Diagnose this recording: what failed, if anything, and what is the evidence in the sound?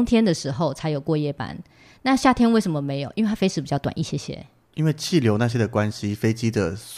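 Nothing failed; the speech shows no audible event at any stage of the chain that would point to a fault.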